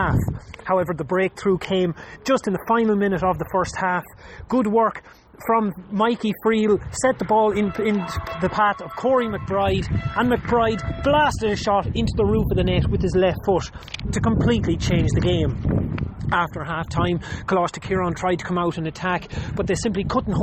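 From 11.13 s to the end, the sound turns duller as channel delay (comb filtering) sets in. One channel runs about a single sample late, roughly 0.02 ms, and summing the two to mono cancels their shared content near 20 kHz. That puts the first notch at the top of the audible range, so the clip doesn't sound hollow or phasey. There's just a gradual high-frequency roll-off. A low-pass filter would show a steeper, more defined cut-off.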